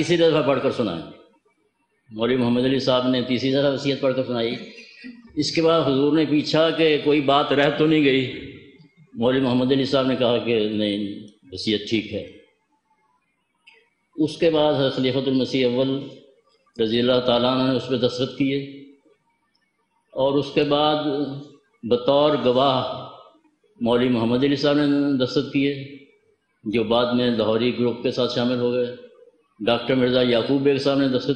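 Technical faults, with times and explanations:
3.50–5.23 s, 7.51–9.25 s and 12.22–13.41 s: drift correction steps. The audio jumps about 6.3% faster and roughly a semitone sharp in the first span, then 6.3% slower and roughly a semitone flat in the other two. Each snaps back abruptly, unlike wavering wow. Likely a clock-matching rate correction.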